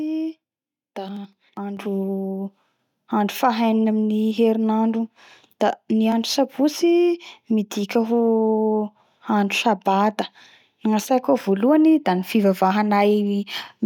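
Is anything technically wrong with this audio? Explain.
Yes. At 1.77 s the microphone volume is stepped up: the call software judged the input too quiet and raised the device's input level in a single jump of about 6 dB. Speech and background noise both become abruptly louder together at that instant, with no gradual ramp.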